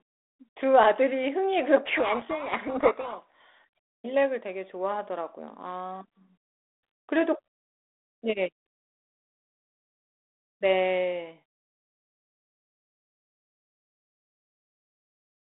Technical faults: codec payload misread

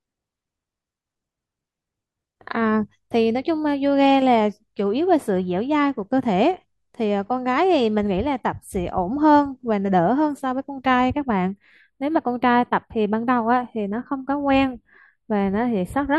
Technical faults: channel delay (comb filtering)

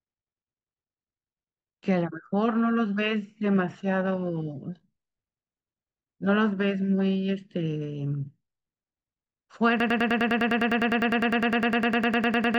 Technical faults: broken-record loop

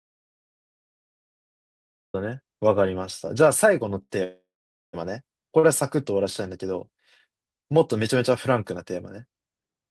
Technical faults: audio dropout to silence; short stall from a late packet; call audio freeze

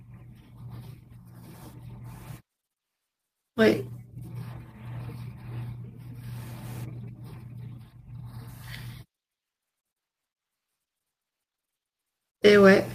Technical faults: none

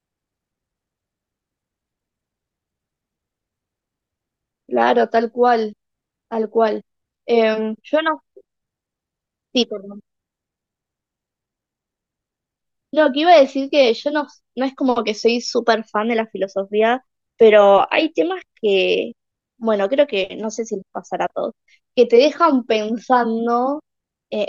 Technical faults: none

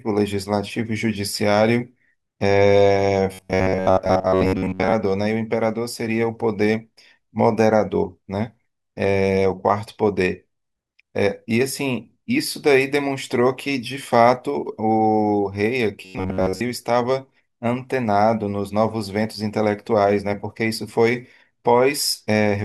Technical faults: robotic sound from repeated short buffers

